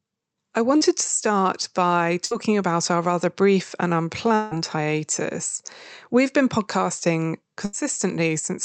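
At 0.77 to 0.83 s, just before "to start by", a short concealed packet loss drops about 40 ms of speech, and the receiver patches it by extending the preceding sound, leaving a brief smear. At 2.25 to 2.33 s and again at 7.65 to 7.75 s, after "been podcasting", a burst of packet loss removes 60 ms and then 80 ms, heard as a fading held buzz or hiss before the speech resumes further on. From 4.35 to 4.53 s, after "our rather brief and", about 160 ms never arrives, likely a long network dropout; the last sound is stretched into a fading buzz or hiss without falling to silence, and the speech picks up past the missing part.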